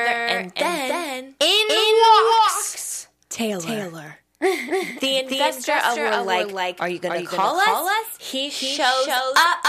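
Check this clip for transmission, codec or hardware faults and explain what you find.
One fault runs through the whole clip: a doubled audio track. A second, full-band copy of the speech trails the original by about a third of a second. It sits a few decibels lower. It has no decay or room colour. This most likely comes from the signal being captured twice, with one path slower.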